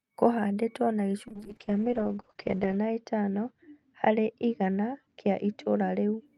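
From 1.31 to 6.31 s a call bitrate drop leaves speech watery and dulled above 8 kHz; the coarse grit separates it from filtering.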